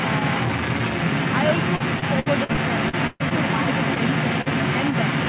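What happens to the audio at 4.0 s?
Right around there, from 3.95 to 3.97 s, there's a short concealed packet loss. About 20 ms of audio never arrived in time, and the receiver stretched the previous sound across the gap before blending back in, so you hear a quick smear or wobble.

Underneath that, and running through the whole clip, a second voice sits slightly louder than the main talker. That's most likely the other side's voice leaking through: the far end's loudspeaker bled into the mic and the echo canceller didn't fully remove it.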